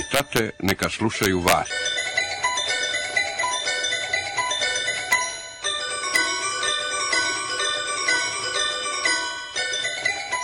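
Integer overflow cracks at 0.14–0.84 s and 1.23–1.53 s (about 2 dB over), then 5.13 and 6.16 s: peaks wrap to opposite sign, far harsher than clipping's flattened tops.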